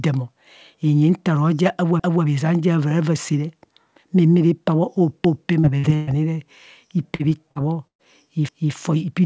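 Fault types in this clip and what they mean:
Overlapping chunks: Each new block of audio begins before the previous one has finished, so the tail of one block plays again at the head of the next. Here about 250 ms repeats at 2.0, 5.25 and 8.49 s, a stutter recurring roughly every 3 seconds.
Short concealed packet loss: Roughly 40 ms of audio failed to arrive and was synthesised by extending the preceding sound before blending back into real signal. It is heard as brief smears or wobbles at 5.60, 5.79, 7.15 and 7.51 s, where short sounds may disappear.
Burst of packet loss: About 120 ms went missing in one run. The receiver extended the last sound and attenuated it as the gap continued, then resumed later in the audio. At 5.95 s the fill continues throughout, while at 7.87 s it fades to about 90 ms of silence.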